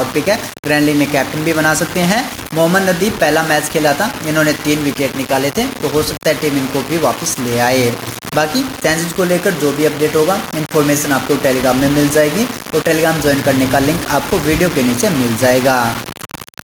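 Low bit depth without dither runs through the whole clip: the audio has a coarse, grainy distortion that rides along with the sound and shifts as it changes. Quiet passages turn gritty instead of smooth, and the error sits only about 15 dB below the signal. This is likely the result of the signal being rounded to very few levels with no dither, which fits roughly a 5-bit word. Gain pumping is also present from start to finish: the gain ducks by around 5 dB each time a loud sound arrives, so loud and soft parts sit unnaturally close in level and the whole clip sounds squashed. The likely cause is input gain set far too high, with a fast limiter or compressor clamping down on every peak.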